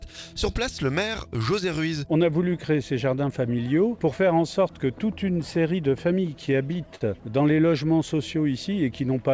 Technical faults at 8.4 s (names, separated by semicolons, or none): none